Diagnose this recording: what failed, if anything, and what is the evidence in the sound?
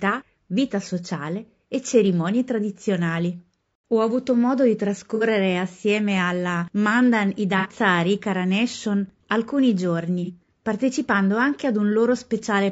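The codec stage shows damage from start to finish: the speech is rough and grainy, with noise filling the gaps between pitch harmonics and a thin, synthetic-sounding top band. The cause is likely low-delay AAC compression (AAC-ELD) at a bitrate that fits about 32 kbps. Its short transform frames resolve voice harmonics poorly and starve the bit budget. On a spectrogram, the harmonic stripes look smeared and speckled, and the upper band looks patchy and flattened.

AAC frame loss with concealment, at the decoder or network stage, produces three brief damaged patches: 5.15–5.24 s, 7.58–7.67 s and 10.25–10.30 s. Each is a smeared, noisy or phasey blur rather than a clean gap. The first two each lose about 60 ms of audio, which fits two lost frames, and the last about 30 ms, or one frame. The decoder padded them from the last good spectrum. On a spectrogram, harmonics dissolve into flat noise in those slices, while the waveform keeps a similar envelope but loses its periodic shape.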